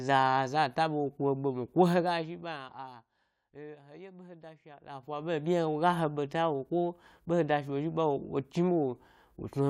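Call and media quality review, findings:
Ticking, zipping texture over the speech, 4.65 to 5.38 s, after "behe da". Zipper noise: gain ramp in 1 dB steps, about 20 per second, roughly 20 dB total, unsmoothed, each step clicking.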